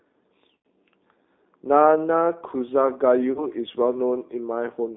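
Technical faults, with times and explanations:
Throughout: G.729 codec. The audio sits in a narrow band from about 250 Hz to 3.7 kHz. It has a plainly rough, slightly synthetic edge, the sound of a model rebuilding speech from filter and pulse data at what sounds like 8 kbit/s G.729A.
0.57 to 0.65 s and 3.32 to 3.47 s: VoIP packet loss concealed by the speech codec. The decoder smears its last frame into a fading buzzy or noisy tone to cover the gaps, which fit about 80 ms and 40 ms of lost audio. Because each frame builds on the previous one, the sound stays weak for a moment afterwards.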